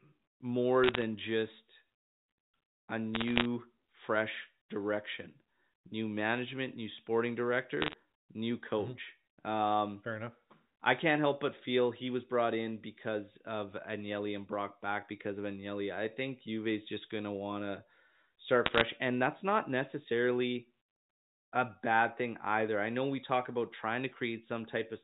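Bit errors on a digital phone line cause brief crackle bursts at 0.84–1.02 s, 3.14–3.45 s (before "fresh direction new management"), 7.81–7.94 s (after "new management new sporting") and 18.66–18.81 s. Flipped bits corrupt single samples into sharp ticks while the speech itself continues, unlike packet-loss gaps.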